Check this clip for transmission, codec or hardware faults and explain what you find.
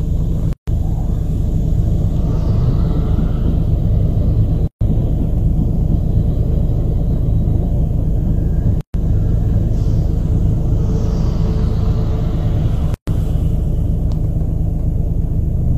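Four gaps at a join of encoded pieces interrupt the sound, recurring every 4 s: 0.53–0.68 s (147 ms), 4.68–4.81 s, 8.81–8.94 s and 12.94–13.08 s (133 ms each). Separately encoded segments were joined untrimmed, so encoder delay and last-frame padding became silence. Each gap has smeared edges, and the sound resumes where it stopped.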